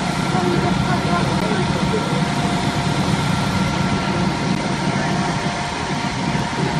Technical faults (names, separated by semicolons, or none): block of digital silence